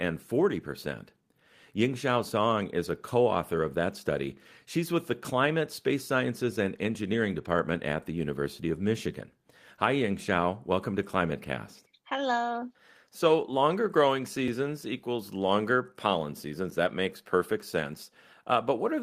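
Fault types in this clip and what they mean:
No technical faults can be heard anywhere in this speech recording. The sound holds steady throughout, with nothing in the signal pointing to a problem in how it was captured or carried.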